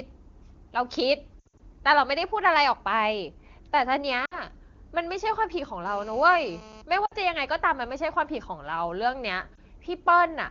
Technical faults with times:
1.40-1.60 lost AMR speech frames
4.25-4.39 lost AMR speech frames
5.86-6.82 GSM phone buzz
7.05-7.14 lost AMR speech frames
9.56-9.58 lost AMR speech frames

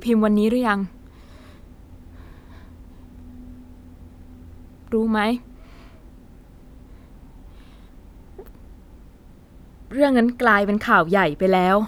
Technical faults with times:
none

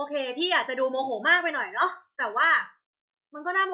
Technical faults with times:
none

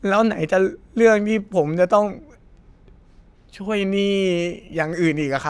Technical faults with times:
none

